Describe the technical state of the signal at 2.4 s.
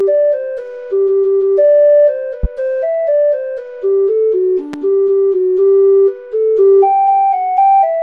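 A loud pop lands from 2.43 to 2.47 s, roughly 10 dB above the sound, likely a voltage spike; it shows as a single tall spike on the waveform and a thin vertical stripe across the spectrogram. Underneath, channel delay (comb filtering) persists: one channel lags by around 5 ms, so summing cuts evenly spaced notches from about 100 Hz upward, seen as horizontal dark bands with a hollow sound.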